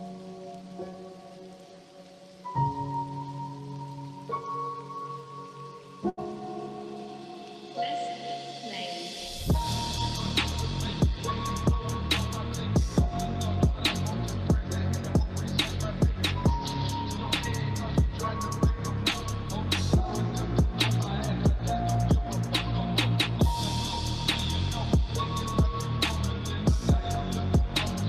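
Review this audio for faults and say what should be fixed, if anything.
There's a burst of packet loss at about 6.09 s, running to 6.19 s. A short run of packets never showed up in time, so the receiver stretched the last bit of sound it had and faded it down for roughly 80 ms, which gives a brief smeared, dwindling patch. Then playback picks up further along, with about 80 ms of the original audio simply gone. To prevent this, add a bit more jitter-buffer depth or forward error correction on that link.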